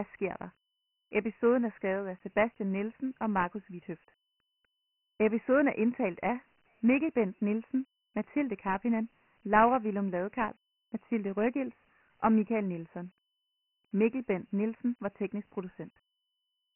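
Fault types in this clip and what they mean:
Dialogic VOX ADPCM: This is the old telephony format where each sample gets squeezed into a 4-bit step that only tracks the change from the last one, so quantisation noise rides along with the speech as a gritty hiss. Here the damage is heavy. Nothing survives above 3 kHz, which fits the slower 6,000-samples-a-second variant at 24 kbps, so the speech sounds narrow and dull with rough grain throughout.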